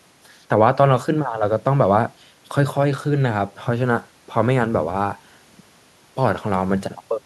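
Speech is all the clip holds, and no technical fault can be heard in it. Nothing in the recording calls for a fix.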